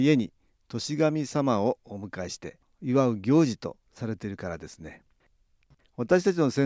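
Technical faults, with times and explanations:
No technical faults can be heard in this speech recording.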